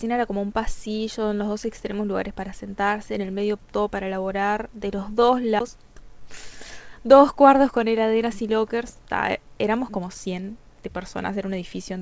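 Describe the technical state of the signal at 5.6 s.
A CD skip occurs at 5.6 s. The laser has jumped to a different turn of the disc's spiral, so playback mutes for roughly 10 ms, giving a tick, and resumes from another point in the recording. The speech jumps abruptly with no transition.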